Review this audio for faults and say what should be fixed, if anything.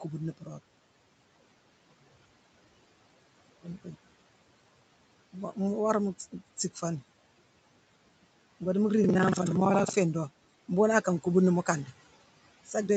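Buffer tearing runs from 9.01 to 9.98 s as a rattling buzz at 21.5 Hz, which fits a 2048-sample buffer. About a fifth of each period replays audio roughly a tenth of a second old. Unlike dropouts, nothing falls silent, and the buzz tracks the signal. Keep the writer safely ahead of the hardware read pointer with enough buffer headroom.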